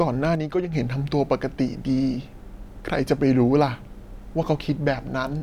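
From 0.35 to 0.73 s the speech suddenly drops by about 6 dB, then returns just as abruptly. The likely cause is one channel dropping out. With only one stereo side feeding the mono sum, shared sound halves and anything unique to the missing side vanishes.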